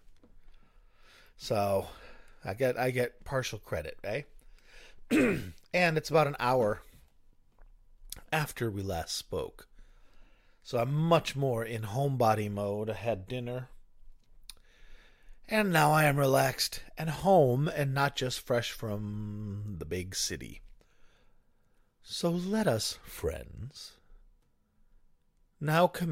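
Speech, with a single corrupt frame decoded at 16.36 to 16.39 s. For roughly 36 ms the audio gives way to a short glitch, peaking around -20 dBFS. The burst spans about two codec frames, which points to flipped bits in the compressed stream. The decoder accepted the damaged data anyway, and the misread gains and codes placed energy at the wrong frequencies for the length of those frames.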